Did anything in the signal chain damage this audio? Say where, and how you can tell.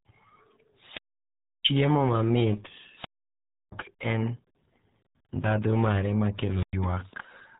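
Yes. Throughout, the speech sounds heavily muffled and gargly, with nothing above 3.8 kHz. That points to the RealAudio 14.4 codec, squeezing audio to 8 kbit/s for dial-up.

From 0.76 to 1.70 s, hiss swells, then about 0.67 s of near silence before speech returns: a wireless microphone squelch dropout, as the fading radio signal triggered the receiver's mute.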